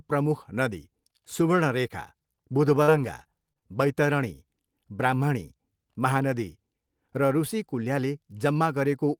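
From 2.83 to 3.63 s, the speech breaks up with repeated packet loss, giving a robotic sound. Audio data went missing four times in under a second. Each time, the gap was covered by stretching the last stretch of sound forward. The longest hole lasts 41 ms. About 100 ms of sound is lost in total, roughly 12% of that span. The result is choppy, with small pieces of the speech dropped out.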